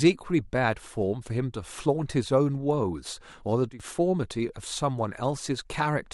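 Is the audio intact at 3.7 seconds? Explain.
No. From 3.71 to 3.80 s there is a sudden gain jump: speech and background noise together drop by about 14 dB, likely from a gain change applied between adjacent samples without a ramp. The waveform shows an abrupt step, and the spectrogram a uniformly darker band.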